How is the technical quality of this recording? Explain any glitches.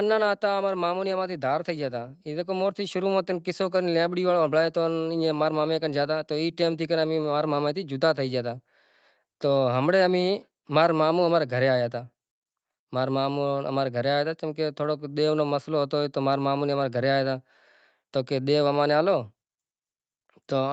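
The level is unsteady in the first three seconds of this speech recording. The automatic gain control first pulls the level down and then pushes it back up. All of it is heard through a call path whose audio stops at about 8 kHz.

Automatic gain falling, 0.05 to 0.8 s: the gain control judged the opening too loud and lowered its gain by about 4 dB over roughly three quarters of a second. The speech starts loud and then sinks, with the background dropping along with it.

Automatic gain rising, 0.89 to 3.07 s: the controller then judged the input too quiet and raised its gain by about 5 dB over about two seconds. Voice and background swell together as a slow, steady lift rather than a sudden step.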